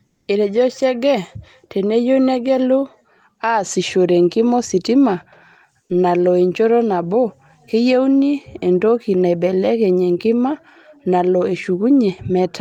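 From 0.07 to 0.27 s, the background gives way to a flat, featureless hiss about 4 dB quieter than before: comfort noise in place of the background. The sender likely paused transmission during non-speech (Opus DTX), and the receiver filled those 200 ms with synthetic noise.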